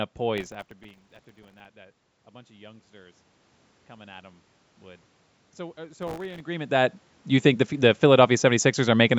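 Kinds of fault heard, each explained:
Processor overload crackle: The processor missed a long run of tiny buffer deadlines, around 1.5 ms each, replaying stale audio with hard edges into every gap. It sounds as gritty tearing before "that a bunch of", with a shorter burst near 6.0 s. On a waveform it shows as jagged discontinuities, and on a spectrogram as broadband vertical speckle.
Automatic gain rising: After the input level fell by about 21 dB, the gain control slowly pushed its gain up by about 5 dB between 3.87 and 7.0 s, ending at "you think the the". Voice and background swell together. A waveform shows the envelope gradually widening, and a spectrogram shows the noise floor brightening with it.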